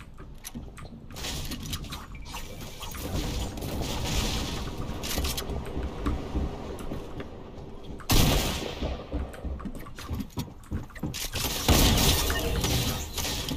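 DAB burbling comes in six bursts: 0.68 to 1.42 s, 3.04 to 4.02 s, 4.89 to 5.57 s, 6.59 to 7.22 s, 8.29 to 9.29 s and 11.17 to 12.17 s. Bit errors slip past the error correction, so corrupted scale factors make single sub-bands jump for a frame at a time. You get a bubbly, chirpy squelch over the sound, a touch gentler in the third and fourth bursts.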